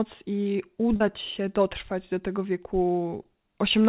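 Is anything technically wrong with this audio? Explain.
Yes. Short concealed packet loss occurs at 0.96–1.02 s, before "się dotrwać do tego", and at 3.22–3.26 s. The receiver stretched the preceding sound over 40 ms and 20 ms gaps, and each one sounds like a brief smear.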